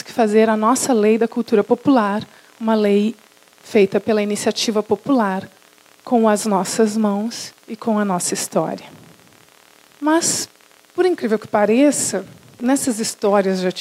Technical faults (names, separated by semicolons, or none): none